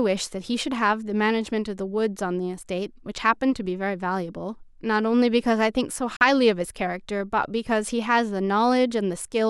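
A speech recording with a single Bluetooth dropout: from 6.16 to 6.25 s the output goes completely silent, then picks up again mid-flow. The likely cause is wireless packets arriving too late and being discarded, which fits a few lost packets. What sets it apart from a buffer underrun is that the speech does not resume where it stopped; that stretch is simply gone.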